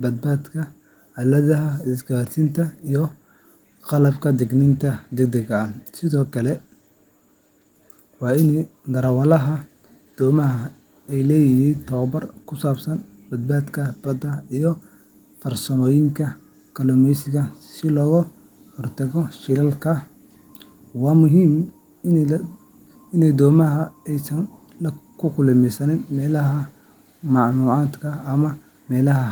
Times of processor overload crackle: none

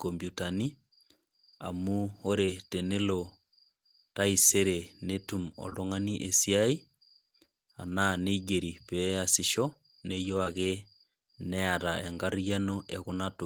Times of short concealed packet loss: 2.45-2.49, 5.69-5.74, 10.44-10.48

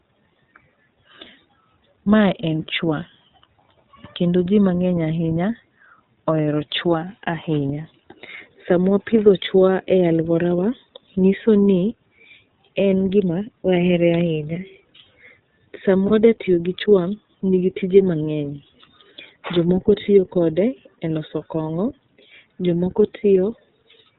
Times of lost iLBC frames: 16.08-16.11

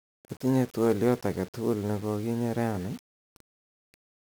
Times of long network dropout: none

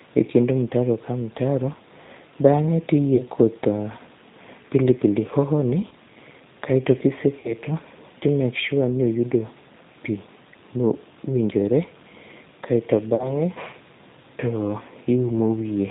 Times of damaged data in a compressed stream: none

